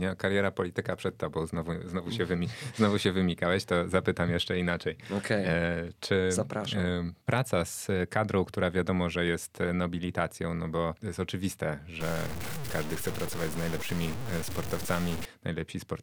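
A speech clip that turns grainy and harsh from 12.00 to 15.25 s, just after "bo to jest oczywiste", with quiet stretches sputtering or dropping out. The likely cause is low bit depth without dither: roughly 5-bit truncation, leaving signal-following distortion only about 10 dB down.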